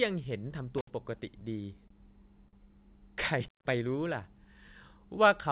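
At 0.78 s an intermittent contact opens the line for about 66 ms, with crackle at both edges: a loose plug or cable briefly breaks the connection, so the speech cuts out and only faint hiss remains until contact is restored at 0.90 s.

From 1.04 to 1.92 s come scattered short gaps, roughly five of them, none longer than about 30 ms and together around 70 ms, or about 7 percent of the stretch. Each late or lost packet was bridged by extending the preceding sound, so nothing drops out, but brief ticks and smears mark the patches.

A short stall from a late packet follows at 2.48 to 2.55 s. The jitter buffer ran dry, and the receiver held the last sound for 44 ms until the packet arrived, then resumed where it stopped. The speech pauses on a stretched sound with a slight buzz or dip, and the timing slips by 44 ms.

A second intermittent contact runs from 3.44 to 3.70 s. The line is open for about 165 ms, longer than the first, with the same crackle at the break and reconnection and a hissy silence in between. 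The call path's narrow band, with nothing above 4 kHz as expected of G.711 mu-law, stays audible throughout.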